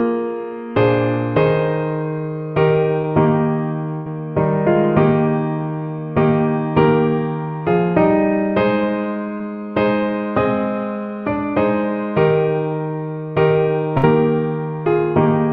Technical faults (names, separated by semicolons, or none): short concealed packet loss; burst of packet loss